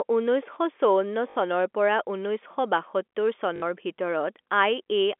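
At 1.30 s and 3.56 s there's packet loss with the last packet repeated. Each 60 ms gap is filled by looping the previous chunk, which fits three 20 ms packets. The loop ignores the pitch, so each comes out as a buzzy robotic stutter.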